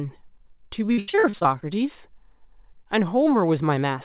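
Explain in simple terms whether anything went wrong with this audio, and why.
Repeated packet loss (robotic sound) hits from 0.92 to 1.63 s. Over that stretch, pieces of the call's audio stream went missing or arrived too late, one after another, the longest hole lasting 81 ms. Each time, the receiving end covered the gap by stretching out the last bit of sound it had, so nearly half of this span is patched-in filler. That makes the sound choppy, with fragments missing. The call line itself carries nothing above 4 kHz.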